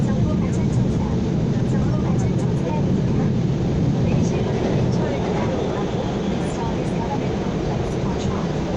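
Nothing in these everyday sounds points to a technical fault; every moment comes across just as it should, with nothing to flag.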